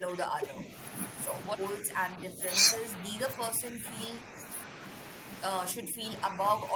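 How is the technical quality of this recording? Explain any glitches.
The recording has one recurring glitch: the speech repeatedly sinks in level. Speech suppressed in double talk occurs at 0.0–0.72 s, 1.8–2.42 s, 2.95–3.95 s, 4.24–4.48 s and 5.74–6.75 s. The likely cause is an echo canceller hearing the far side at the same moment and, unable to separate the talker from loudspeaker echo, turning both down. The speech dips by about 10 dB, or about 5 dB in the short 4.24 s event.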